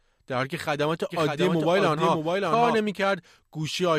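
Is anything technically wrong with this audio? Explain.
Yes. From 1.10 s to 2.76 s the speech is heard twice, a doubled audio track. A second full-band copy trails the original by about 0.7 s at roughly 5 dB lower level, with no decay or room colouring, and it cuts in and out abruptly at those boundaries. The likely cause is the same signal reaching the mix over a second, slower capture path, or an edit leaving two misaligned copies stacked.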